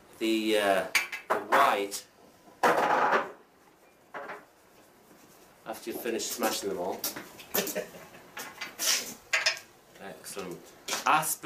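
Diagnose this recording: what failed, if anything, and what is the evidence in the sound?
From the start to 2.82 s, a fine hiss and grainy roughness rides on the sound, swelling with louder and brighter passages and dropping away where the level falls, then clearing after 2.82 s. That points to sample clock jitter at the converter: its clock wandered by something like 10 microseconds, so each sample was taken slightly off time, and fast-changing parts of the waveform picked up errors only about 20 dB below the signal.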